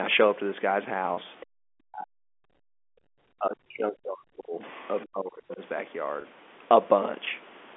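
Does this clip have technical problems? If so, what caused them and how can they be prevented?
Yes. Three kinds of fault are audible.

Packet loss with pitch repetition: at 1.14 to 1.17 s, 3.00 to 3.03 s and 6.21 to 6.24 s, the sound briefly holds with a slightly buzzy tone. Each 30 ms gap, consistent with one lost packet, was bridged by repeating the last pitch period. A more stable network path or jitter buffer would prevent this.

Other side's voice leaking through: faint scraps of a second voice sit about 25 dB below the speech at 1.40 to 1.44 s and 4.71 to 4.88 s. The likely cause is loudspeaker playback reaching the microphone and slipping past the echo canceller. A headset would prevent this.

Speech suppressed in double talk: the speech dips sharply or drops out in pieces at 1.45 to 2.11 s, 3.17 to 4.63 s and 5.05 to 5.60 s, falling by up to about 40 dB in the first stretch and about 35 dB in the others. 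This is likely the echo canceller turning everything down while both sides talked at once. Headsets, or an echo canceller with better double-talk handling, would prevent this.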